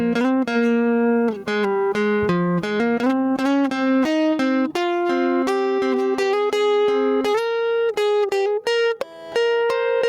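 From start to finish the music shows gain pumping. The level never settles. Each loud moment pulls the whole mix down, and the quieter material and background rise back up in the gaps between. The swing is large, around 20 dB. The cause is likely input gain set far too high, with a fast limiter or compressor clamping down on every peak. Loud and soft passages end up pressed together, and the music sounds squashed and breathless.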